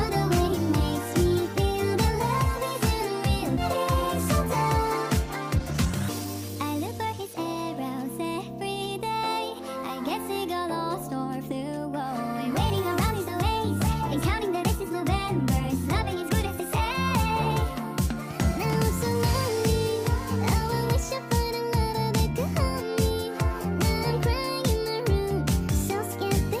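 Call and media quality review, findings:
Skip ahead, 3.57–3.59 s: a run of roughly one second of audio discarded, either lost in transit or dropped on jitter buffer overflow while later packets were queued. Playback jumps straight across with no fill, so the two sides abut almost seamlessly and about a second of sound is simply absent. Delay falls by about the same amount.

Jitter buffer speed-up, 5.25–7.35 s: buffer over target depth, probably after a delayed burst of packets. The receiver repeatedly trimmed short pitch-period segments, about half a second in total. The audio runs at 121% speed with pitch unchanged, so this stretch sounds hurried.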